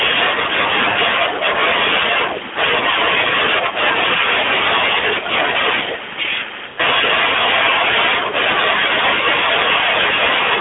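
At 0.90 to 0.97 s the speech smears and sags, at 5.00 to 5.04 s it gives a brief dip, and at 6.68 to 6.80 s it draws out and fades toward silence before returning weak or rough. These are lost AMR speech frames: corrupted frames were discarded, and the decoder bridged each gap by repeating the last good pitch and vocal tract settings at falling gain. The gaps of about 60, 20 and 100 ms fit runs of three, one and five 20 ms frames in this narrowband, telephone-band stream.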